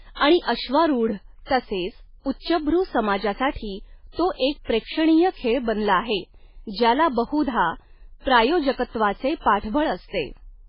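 Throughout, the speech has no content above 5.2 kHz and sounds watery and swirly. Heavy MP3 compression is the likely cause, fitting a very low bitrate near 16 kbps.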